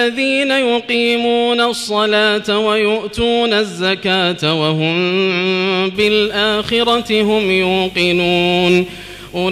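From about 5.95 s to the end there's a video or display buzz: a screen or video cable is leaking into the audio path. You get a rough 50 Hz buzz locked to the picture's field rate, with a haze of hash riding on top, plus a thin whine up at 15.6 kHz from the line scan. It sits roughly 20 dB under the wanted signal.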